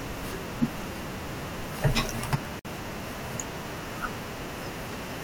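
Separately encoded pieces of this speech were joined without trimming each encoder's start-up delay and final-frame padding, leaving a gap at a join from 2.59 to 2.65 s. The speech drops into a 55 ms gap, its edges smeared so the silent part is shorter, then resumes where it stopped.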